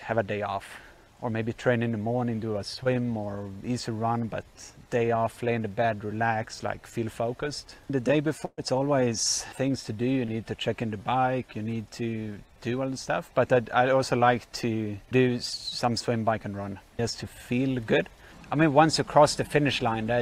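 At 2.83 to 2.87 s and again at 10.25 to 10.29 s there's short concealed packet loss. About 20 ms never arrived, so the receiver stretched the preceding sound to cover it and blended back in, leaving a quick smear or wobble.

At 8.45 to 8.59 s a burst of packet loss takes out about 120 ms. The decoder keeps extending the last sound while turning it down, fades to about 40 ms of silence, then picks up further along with that stretch simply gone.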